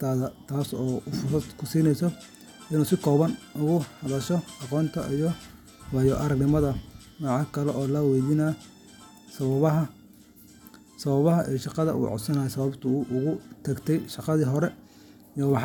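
No technical faults can be heard anywhere in this speech recording. No glitch, dropout or other disturbance interrupts the audio at any point.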